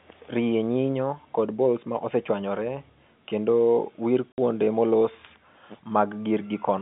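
Speech carried over a G.711 telephone channel, band-limited to about 150 Hz to 3.6 kHz. Right after "ma osechwanyore kendo wir", from 4.32 to 4.38 s, packet loss filled with silence cuts a 60 ms hole with abrupt edges. That length fits three lost 20 ms packets that the receiver replaced with silence instead of concealing the gap.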